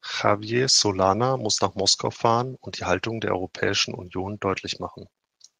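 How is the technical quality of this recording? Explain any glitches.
No technical faults can be heard in the recording: the signal stays continuous and steady throughout, with nothing that needs explaining.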